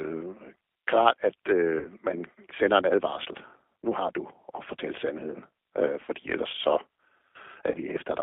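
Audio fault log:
throughout: G.729 codec. The speech is confined to a telephone band of roughly 300 Hz to 3.5 kHz, with nothing above it, and carries a plainly audible rough, slightly synthetic texture. That comes from rebuilding each short frame from a vocal tract filter, a pitch predictor and a few coded pulses rather than the actual waveform. The character fits the G.729A variant running at 8 kbit/s.
1.79–1.87 s, 6.05–6.10 s, 7.71–7.78 s: VoIP packet loss concealed by the speech codec. At each point the sound smears into a fading buzzy tone or coloured noise as the decoder repeats its last pitch and filter settings with falling gain. The first gap loses about 60 ms, which fits six lost 10 ms frames. The later two fit three lost frames each. Because each frame builds on the previous one, the speech stays weakened briefly after each gap.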